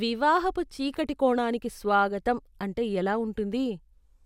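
No audible technical faults here.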